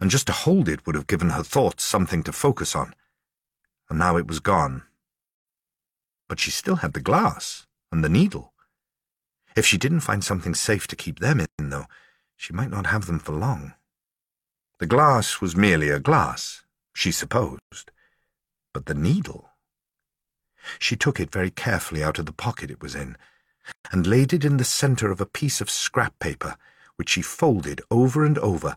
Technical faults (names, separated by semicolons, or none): gap at a join of encoded pieces